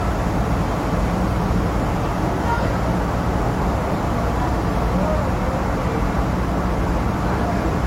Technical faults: transcoding between lossy codecs

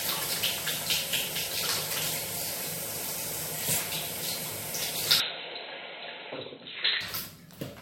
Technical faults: input switched to a poorer device

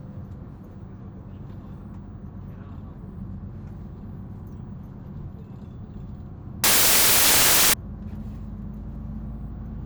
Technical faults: samples built from the wrong bytes

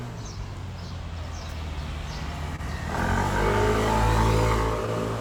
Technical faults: clock drift between sender and receiver; short stall from a late packet

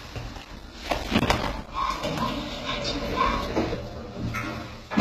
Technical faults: HE-AAC compression; processor overload crackle; channel delay (comb filtering)

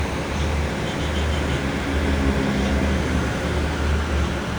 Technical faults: wrong sample rate

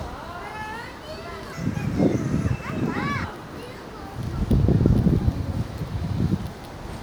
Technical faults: section at the wrong speed

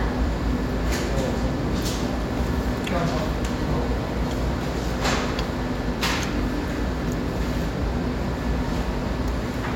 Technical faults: none

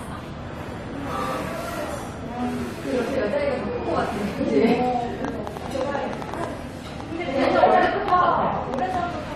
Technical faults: train of clicks

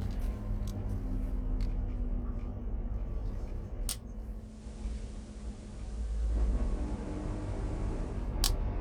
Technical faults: channel delay (comb filtering); digital radio blending to analogue

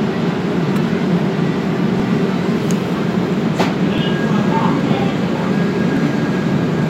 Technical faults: overlap between stream segments

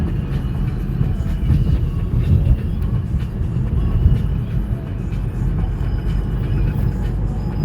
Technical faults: none

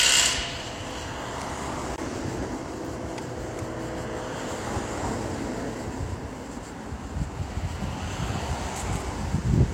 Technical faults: block of digital silence

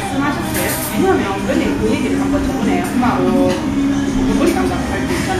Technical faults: Vorbis compression

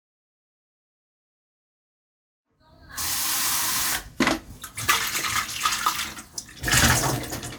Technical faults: none

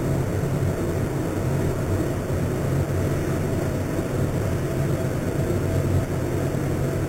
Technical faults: imaging from sample-and-hold upsampling

